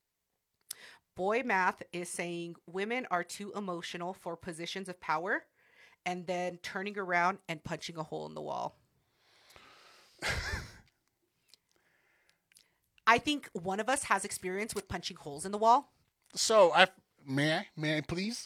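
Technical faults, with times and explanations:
No technical faults found in the speech recording; nothing to log.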